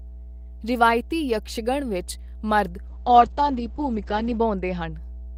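A ground loop or a nearby transformer is feeding the power line into the signal for the whole clip, producing mains hum at 60 Hz. It sits underneath the speech as a steady, low, buzzing tone with a few low harmonics, and it is strong, roughly 10 dB below the speech itself, so it stays clearly audible even while someone is talking and fills every pause.

At 2.88 s, right after "ਵਿੱਚ ਮਰਦ", the call's bandwidth estimate falls and the encoder is forced onto far fewer bits. The drop in quality fits a fall from around 32 kbps to around 9 kbps. This is a call bitrate drop: the coding turns coarse and the upper spectrum is cut from about 20 kHz down to 8 kHz. The speech sounds muffled, rough and watery, worst for about 1.5 s, then clears again by 4.99 s.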